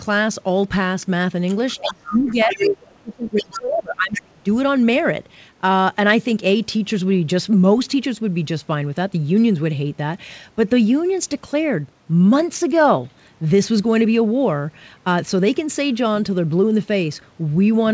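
From 1.74 to 4.49 s, the talker's voice drops in level, by up to about 30 dB at the deepest point, losing high end or breaking into pieces. This is speech suppressed in double talk, likely from an echo canceller that could not separate this talker from loudspeaker echo and turned both down. Unlike a plain level dip, the gaps follow competing sound.

Inside that window, the other side's voice leaks through in scraps at 1.86 to 2.33 s, 2.50 to 2.70 s, 3.38 to 3.59 s and 4.14 to 4.21 s. It sits about 15, 5, 15 and 10 dB below the talker, likely because the canceller left residual echo. This is a second voice present in the clip, not the talker being removed.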